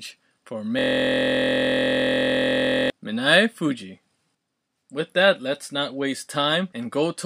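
From 0.79 s to 2.90 s, the speech gives way to a system hang loop. The computer or driver stopped feeding new audio, so the sound hardware kept replaying the same piece of its ring buffer. That piece is 23.22 ms long, which fits a 1024-sample buffer. It repeats 91 times. At about 43.1 Hz, the exact repeats fuse into a steady buzz rather than separate stutters.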